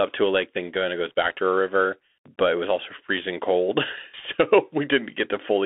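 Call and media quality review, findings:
Narrow, boxy speech throughout, confined to about 250 Hz to 3.6 kHz. Scratchy s sounds, granular hiss under the voice, harsh distortion on loud bright passages. Probable component: Bluetooth CVSD headset codec, consistent with a 64 kbps link. One-bit up/down delta coding with an adaptive step that lags fast, loud high-frequency content. Damage plainly audible.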